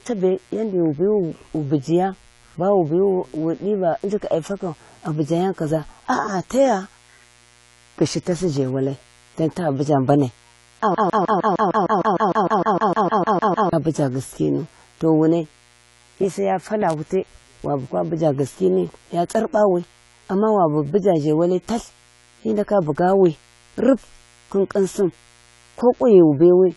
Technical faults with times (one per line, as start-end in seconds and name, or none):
0.00-26.76 mains buzz
0.00-26.76 AAC compression
10.95-13.73 broken-record loop